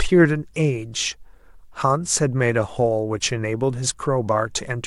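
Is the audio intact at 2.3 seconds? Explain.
Yes, the speech at 2.3 seconds plays through intact, with no dropout, click, distortion or other fault at that moment.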